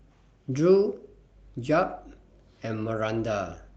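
Nothing goes wrong anywhere in the recording; there isn't a single technical fault to point to.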